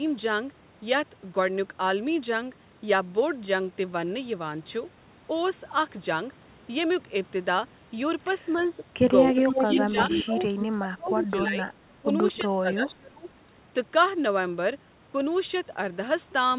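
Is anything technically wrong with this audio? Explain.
Yes. This speech clip has two faults, heard over audio with nothing above 4 kHz, which fits narrowband telephone coding.

Echo leak appears at 8.58–8.63 s, 9.34–10.22 s, 10.45–10.66 s and 12.36–12.40 s. A delayed copy of the speech comes back about 280 ms late at first and about 310 ms late after that. Its level ranges from faint, about 30 dB down, to as loud as the speech itself around 9.3–10.2 s. The likely cause is a loudspeaker's output reaching the far microphone and getting past its echo canceller.

Speech suppressed in double talk occurs at 9.91–10.40 s, 10.78–11.68 s, 12.01–12.10 s and 12.41–13.25 s. These spans overlap or sit right beside the echo bursts. The speech dips and breaks up in pieces, falling by about 10 to 25 dB at the deepest points. The likely cause is the canceller failing to separate near speech from echo and attenuating both.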